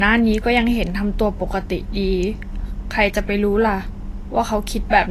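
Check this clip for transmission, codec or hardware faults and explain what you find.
One fault runs through the whole speech clip: low-bitrate audio saved at a high bitrate. Nothing is present above 14.1 kHz, which points to a likely earlier low-bitrate encode. Re-saving it as high-bitrate MP3 cannot restore the removed detail.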